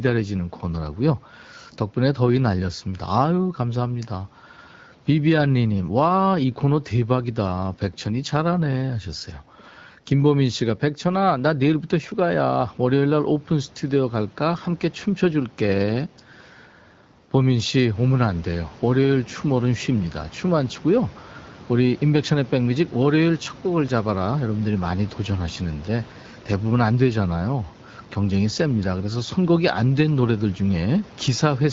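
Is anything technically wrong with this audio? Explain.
No, nothing here is technically wrong with the audio.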